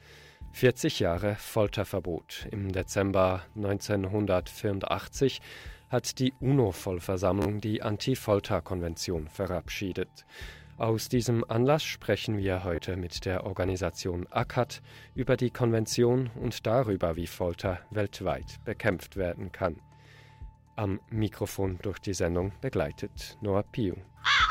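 At 7.42 to 7.46 s the sound catches on itself for about 40 ms, a short buzzing repeat of one tiny slice, and at 12.76 to 12.78 s a briefer stutter of about 27 ms does the same. Each time the sound picks up further along, as if it had carried on underneath. This is Bluetooth stutter: data arrived late or not at all, and the receiver replayed its last buffer to fill the gap, a loss that fits roughly three packets and then two.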